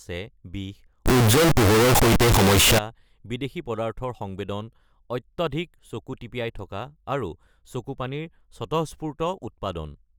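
From 1.06 to 2.79 s the speech turns loud, harsh and squared off, with noise as loud as the voice, likely float read as integer.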